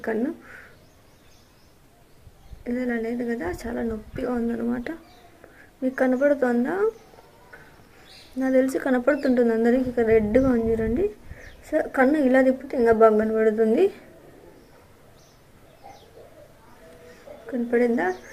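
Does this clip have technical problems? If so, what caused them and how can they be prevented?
No, nothing in this recording points to a technical fault, so there is no cause to trace and nothing to prevent.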